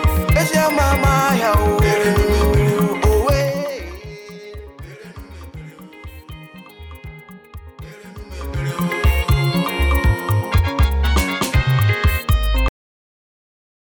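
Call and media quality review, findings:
Cut-off end at 12.68 s. Sound stops mid-event into digital silence, no decay. Final buffers likely never written or played out.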